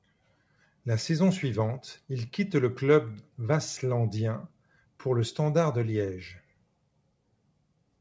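Nothing stood out on listening to this speech, which comes through a call path whose G.722 coding leaves no content above 8 kHz.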